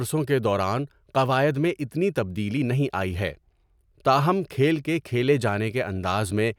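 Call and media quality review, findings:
No findings for this call and media quality review: no faults heard in the speech.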